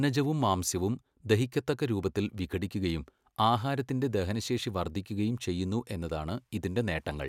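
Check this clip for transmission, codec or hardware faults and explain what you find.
I found no faults to explain in this clip.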